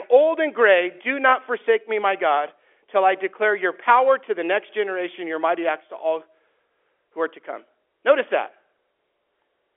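No technical faults are audible.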